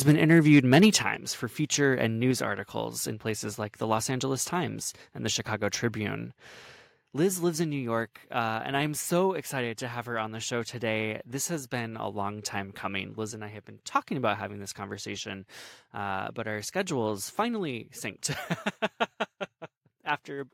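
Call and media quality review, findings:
Mic input gain too high, likely microphone overload: converter ceiling exceeded by about 5 dB, 0.08–0.87 s. Speech peaks flattened, harsh crackle on loudest syllables, around 2% of samples clipped.

Input level reduced in steps, likely microphone volume stepped down by call software on loud input: about −5 dB at 1.02 s, before "for feature and"; about −2 dB at 2.31 s, before "articles in places like". Speech and background drop abruptly.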